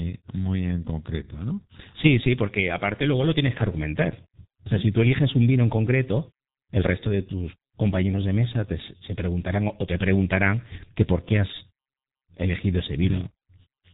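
From start to finish the speech carries heavy G.723.1 codec damage. The coder rebuilds the voice from a coarse model refreshed only once per frame, which fits a rate near 6 kbit/s, so it sounds muffled and hoarse, with smeared consonants. On a spectrogram, energy stops dead at about 3.8 kHz, leaving an empty band above, while harmonics below look grainy and blocky over time. The waveform appears smoothed, lacking sharp transients.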